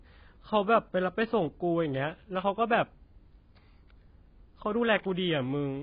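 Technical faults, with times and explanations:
Throughout, AAC compression: the encoder was likely starved of bits, and the heavy damage fits AAC-LC at around 16 kbps. It removed everything above 5 kHz and coarsely quantised the rest, leaving the speech dull and smeared, with warbling, fizzy sibilants.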